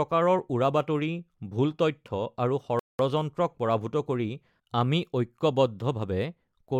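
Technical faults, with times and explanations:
2.79 to 2.99 s, rebuffering stall: the player used up its downloaded audio and paused until more data arrived. The speech cuts to 0.2 s of silence, then resumes exactly where it stopped, with nothing missing, but the clip runs that much longer.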